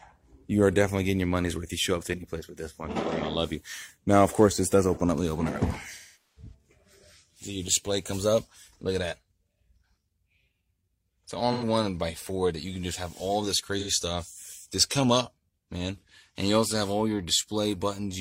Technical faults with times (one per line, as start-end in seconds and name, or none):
2.91-2.98 AAC frame loss with concealment
5.92-6.54 AAC frame loss with concealment
11.53-11.65 AAC frame loss with concealment
13.79-13.91 AAC frame loss with concealment